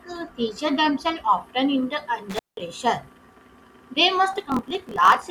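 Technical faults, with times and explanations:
2.30–2.60 s: intermittent contact. The connection opens for about 182 ms, so the speech drops out with crackle at both edges and faint hiss in the gap. The waveform shows a near-flat stretch between sharp spikes, and the spectrogram shows broadband clicks framing an empty band.
4.31–5.30 s: block size mismatch (truncated). The end of each block is discarded, which fits a 1024-sample read, giving a 43.1 Hz buzz and speech running 1.12 times fast with its timbre kept. The spectrogram shows evenly spaced vertical seams, and the waveform shows periodic jumps.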